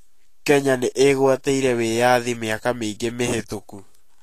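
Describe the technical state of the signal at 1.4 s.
At 1.4 s, as across the whole clip, the speech shows Vorbis compression damage: hissy, grainy treble and smeared attacks. A spectrogram shows a hard ceiling at 14.2 kHz, with speckled noise replacing fine upper detail, likely from a low-bitrate encode near 37 kbps.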